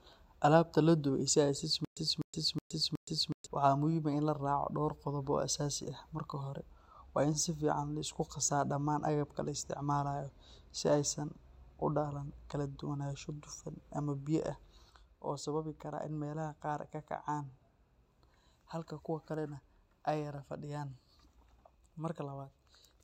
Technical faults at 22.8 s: one channel drops out

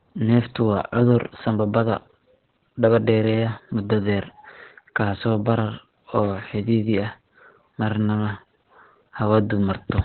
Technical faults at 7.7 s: Opus voice compression

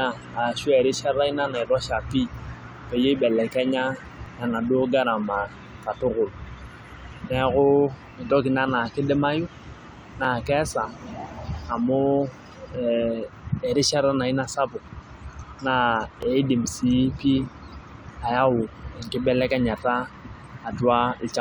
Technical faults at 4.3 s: overlap between stream segments

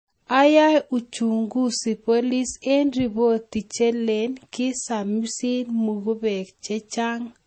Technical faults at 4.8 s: low-bitrate audio saved at a high bitrate

